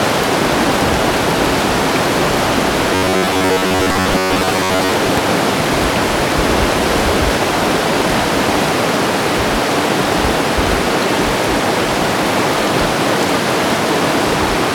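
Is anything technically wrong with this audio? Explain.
Yes. From 2.95 to 4.91 s there is robotic sound from repeated short buffers, likely caused by audio arriving too slowly, so the software keeps looping roughly 10.7 ms fragments through most of that stretch. The loops impose a rigid, metallic 93.8 Hz buzz.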